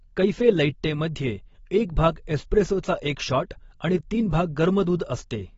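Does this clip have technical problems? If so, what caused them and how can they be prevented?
Yes. The speech was likely squeezed through AAC compression at a very low bitrate, about 24 kbps for AAC-LC judging by the damage. The encoder discarded everything above 7.6 kHz and starved the remaining bands, so the whole clip sounds dull and smeared, with warbly, fizzy sibilants. Encoding at a higher bitrate, or keeping an uncompressed master, prevents this.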